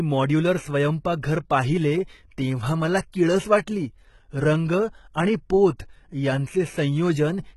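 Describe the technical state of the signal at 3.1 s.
At 3.12 s, just after "पाहिले तेव्हा मला" and before "किळस वाटली रंग आणि", there is a pre-echo: a short hiss about 14 ms long runs ahead of the consonant attack, which sounds softened. The codec spread quantisation noise across its whole transform block, so noise sized for the loud onset also filled the quiet gap before it. On a spectrogram this shows as a thin, broadband smear leading the attack. On the waveform, low-level noise sits where there should be near-silence.

Across this moment, as everywhere in the clip, the speech carries heavy HE-AAC compression, pointing to a very low bitrate of around 16 kbps. Only the lower spectrum is truly coded. The treble is rebuilt by copying lower bands upward under a coarse envelope, so sibilants sound gritty and metallic, likely from spectral band replication. A spectrogram shows blocky, repeated texture in the upper bands and nothing above 11.8 kHz.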